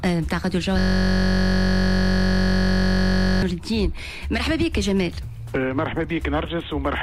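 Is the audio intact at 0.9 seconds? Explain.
No. At 0.9 seconds the audio is caught in a system hang loop that runs from 0.79 to 3.43 s. The system froze while the playback hardware kept replaying the same ring buffer, so a single 21.33 ms slice, which fits a 1024-sample buffer, repeats exactly about 123 times. Because the slice is so short, the repetition fuses into a steady buzz at 46.9 Hz, the rate at which the loop restarts.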